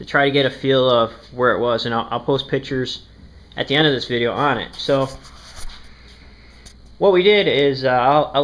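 No technical faults can be heard anywhere in this clip.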